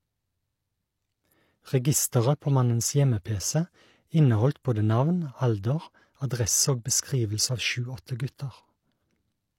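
At 4.63 s a short hiss arrives just ahead of a sharp onset in the speech, and the attack itself sounds softened and smeared. This is pre-echo: the codec spread quantisation noise across the whole transform block, so noise sized for the loud attack leaked about 17 ms earlier.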